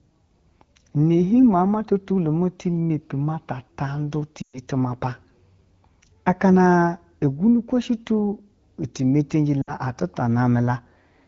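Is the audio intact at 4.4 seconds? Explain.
No, there's a dropout from about 4.41 to 4.59 s, and it's lost AMR speech frames. The decoder got frames it couldn't trust and concealed the gap by repeating the last good pitch and vocal tract settings at falling gain. With this AMR wideband stream, that fill drops to near silence within two frames. Then the speech returns thin and a bit rough for a moment. The missing stretch is about 120 ms, which fits a short run of 20 ms frames.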